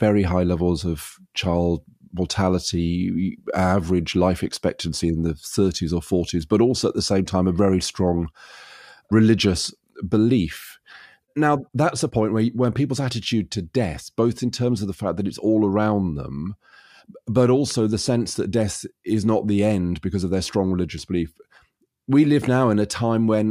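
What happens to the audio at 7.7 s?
Nothing goes wrong at 7.7 s; the speech continues intact through that moment with no dropout, click, distortion or other fault.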